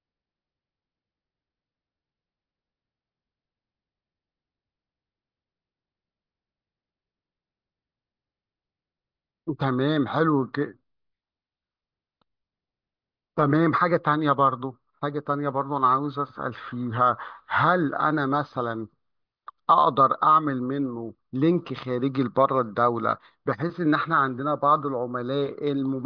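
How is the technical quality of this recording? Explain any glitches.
No glitches to explain: nothing in the recording stands out as a technical fault.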